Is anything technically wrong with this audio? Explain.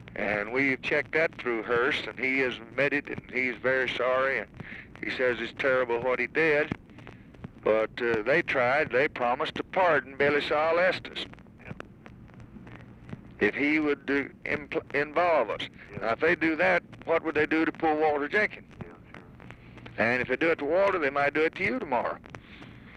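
No, nothing is technically wrong with this audio.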